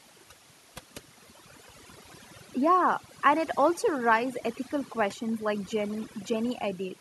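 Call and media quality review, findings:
Overdone noise removal, throughout. Background gated to near silence with twinkling specks. Noise suppressor set too aggressive, cutting bands near its noise estimate along with quiet speech detail. Unlike low-bitrate codec smearing, the specks sit in the gaps between speech.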